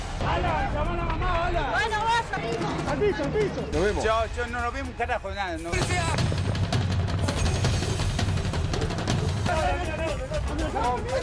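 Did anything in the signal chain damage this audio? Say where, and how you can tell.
No, nothing stood out on listening that would point to damage at any stage of the signal chain.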